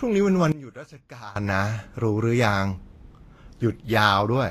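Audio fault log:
throughout: Vorbis compression. Nothing reaches above 14.2 kHz, and the treble just below that edge turns grainy and hissy. The codec damage is plainly audible. Fine high-frequency detail has been replaced by noise of similar energy, so the treble sounds rough rather than crisp. The dullness at the top and the gritty texture fit a low-quality lossy encode. The likely cause is Vorbis at a low bitrate, around 34 kbps, which quantises the residue coarsely.
0.52–1.36 s: sudden gain jump. At 0.52 s the level drops abruptly by about 19 dB with no fade. The speech and the background noise fall together. At 1.36 s both snap back up just as suddenly. Because everything shifts at once, the change sits in the signal chain, not in the talker. The likely cause is a digital gain setting applied and then removed instantly, without a ramp.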